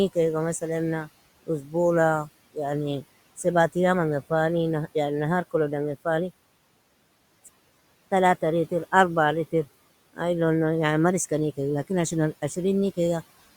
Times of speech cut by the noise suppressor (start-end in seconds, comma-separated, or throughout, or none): 1.43-1.74